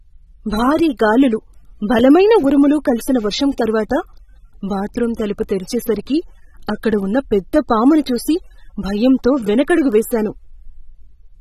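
Throughout this speech clip the sound is dull and smeared, with nothing above 13.8 kHz, pointing to likely AAC compression at a low bitrate around 27 kbps.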